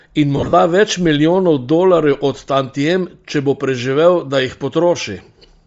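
Across the whole clip the speech has a breathy, grainy edge, with the upper frequencies sounding hissy rather than clear. This is likely Bluetooth LC3 compression. At a low bitrate, around 32 kbps judging by the damage, the codec discards much of the upper spectrum and fills it with noise.

From 0.37 to 0.53 s, just before "več milijonov dolarjev od", the speech breaks into a noisy, smeared stutter. These are lost LE Audio frames. About 120 ms of audio went missing in scattered gaps across that 160 ms, the longest running roughly 40 ms. The decoder filled each gap by repeating the previous spectrum with scrambled phase.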